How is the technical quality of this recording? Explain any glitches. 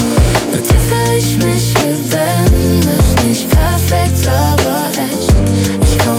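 No glitches or technical faults are audible anywhere in the recording.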